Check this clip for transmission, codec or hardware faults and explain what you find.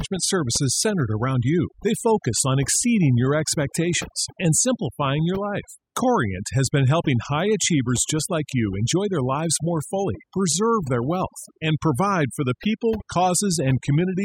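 The fault here is overdone noise removal, present for the whole clip rather than at any one moment. A noise reduction stage was driven far too hard, so any frequency band sitting near its estimate of the background noise gets pulled down sharply or cut out entirely, and the softer parts of the speech are caught along with it. The result is a background that drops and breaks up into twinkling specks.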